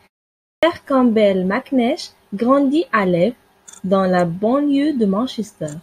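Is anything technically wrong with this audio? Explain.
Yes. From 0.39 to 0.63 s there is a clipped start after a pause: following 0.39 s of silence, the output device was still waking, so about 0.24 s of speech is swallowed and it begins abruptly, missing its onset. Muted pauses would mainly drop background rather than speech.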